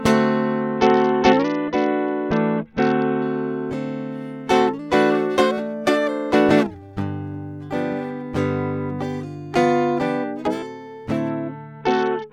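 A Bluetooth SBC bit pool drop hits this music clip twice, from 0.62 to 3.22 s and again from 11.29 s to the end. The link appears to have congested, and the encoder cut its bit budget sharply, which fits a fall from a bit pool of 28 to 7, around 66 kbps. Starved of bits, the top sub-bands get few or no bits and the rest are coarsely quantised, so the treble dulls and a gritty noise rises over the music.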